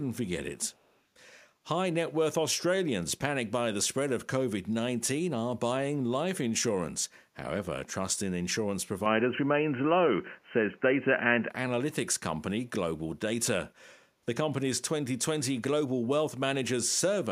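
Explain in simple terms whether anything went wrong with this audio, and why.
Yes, two things went wrong. First, an echo leak: the other side's echo canceller likely failed to remove all the loudspeaker sound its microphone caught. From 0.68 to 0.99 s, a very faint copy of the speech trails about 280 ms behind.

Second, an input switched to a poorer device: at 9.06 s the recording likely jumped to a lower-quality microphone. Until 11.5 s the speech sounds duller, with a small jump in loudness and faint new background noise. There is no gap at the switch.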